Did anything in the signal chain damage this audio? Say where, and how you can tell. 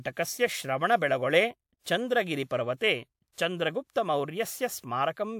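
Yes, the codec stage left pre-echo in this speech. A short hiss rises just ahead of sharp onsets at 2.76 to 2.81 s, 3.32 to 3.38 s and 3.91 to 3.96 s, spreading about 54, 54 and 47 ms before each attack and softening it. The transform coder spread quantisation noise across the whole block, so the quiet moment before the attack was filled. Room reverb would trail after the attack, whereas this noise comes before it.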